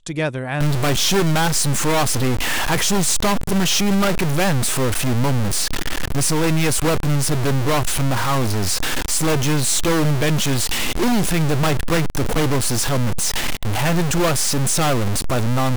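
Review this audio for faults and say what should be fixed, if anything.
From 0.61 s to the end the speech carries harsh, buzzy distortion, and pauses fill with noise at a fairly high level of about -15 dBFS. This is likely a stuck bit, one data bit held fixed so samples jump by that bit's weight. Check converter and data-line wiring and run a bit-pattern test on the capture chain before recording.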